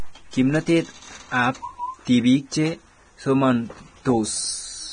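Across the whole recording the speech sounds hissy and grainy, with consonant onsets smeared and vowel tones roughened, and nothing survives above about 9.7 kHz. This is heavy Vorbis compression, likely at a low bitrate, the damage fitting something near 23 kbps. The encoder coded a smooth spectral floor with a residue on top, cut the top band entirely, and quantised the remaining treble so crudely that its fine detail was swapped for noise of similar energy.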